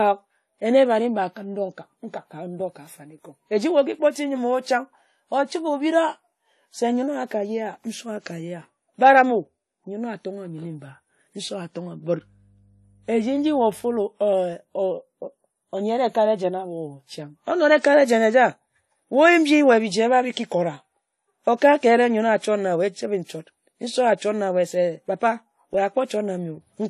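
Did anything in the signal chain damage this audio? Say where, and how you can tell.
Yes. At the codec stage, the speech throughout carries transcoding artefacts between lossy codecs, likely from a WMA encode at around 48 kbit/s being re-encoded to AAC-LC at a similar rate. Two layers of coding damage are heard at once: swirly, smeared consonants plus a second set of warbly pre-echo and quantisation noise. On a spectrogram, all energy stops at a hard ceiling near 13.9 kHz for the whole clip, with patchy, flickering holes in the upper bands.

In the analogue wiring, mains hum appears from 12.16 to 14.07 s: a steady 50 Hz tone, faint and well below the speech, that a ground loop or nearby transformer couples in through the wiring. On a spectrogram it shows as a thin horizontal line at 50 Hz, with weaker lines at low harmonics, spanning just those two seconds. In the waveform, the quiet gaps show a small, regular 20 ms ripple.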